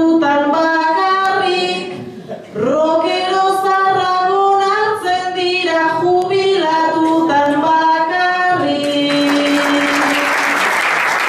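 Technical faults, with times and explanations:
0.63–11.19 s, word clock ticks: a steady run of short ticks, about one every 0.7 s and some twenty in all. The receiving device runs on its own clock, off from the sender's by roughly 40 ppm, so each slip drops or repeats a single sample.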